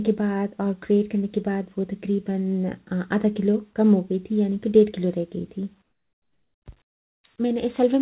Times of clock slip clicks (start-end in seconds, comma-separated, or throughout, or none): none